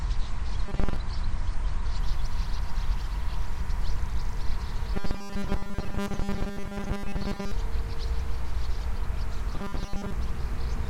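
For the first 2.0 seconds the audio sounds like an adaptive stream starting at a low bitrate. The treble is missing, the top end is dull, and the codec artefacts are stronger, which fits a lean AAC rendition around 32 kbit/s. The player then switches to a better version, plausibly around 96 kbit/s. The treble comes back abruptly at 2.0 s with no gap, as the player settles on the stronger stream once it has measured the connection.

Overlapping that opening, from 0.66 to 0.96 s, the audio goes robotic, and it does so twice more, from 4.95 to 7.52 s and from 9.55 to 10.12 s. All three stretches carry a rigid, metallic buzz at 200 Hz, and most of the real material seems to be replaced. That's the signature of robotic sound from repeated short buffers, likely caused by audio arriving too slowly and the software looping roughly 5 ms chunks to fill the gap, which stamps that fixed pitch onto the sound.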